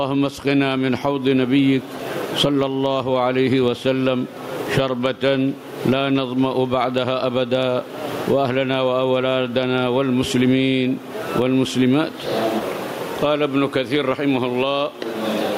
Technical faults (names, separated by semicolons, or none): gain pumping